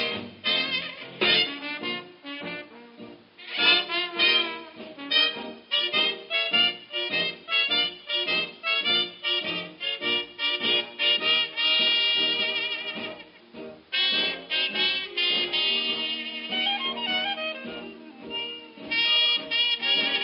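No faults are audible anywhere in the recording.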